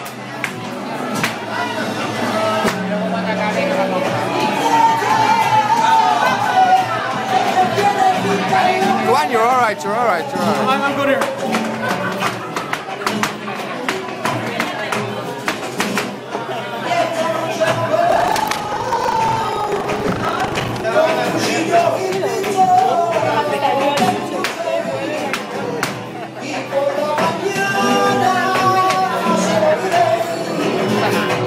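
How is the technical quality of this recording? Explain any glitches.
One glitch stands out: buffer tearing from 18.08 to 20.85 s. The writing program and the playback hardware have drifted out of step around a ring buffer, so within each period most of the audio, roughly two-thirds or more, comes from the previous lap, about 150 ms stale, with hard joins on either side. Those splices recur at 25 Hz, which fits a 40 ms buffer period, producing a steady robotic rattle. Unlike dropouts, nothing goes silent, and the buzz follows the signal rather than sitting on top as independent noise.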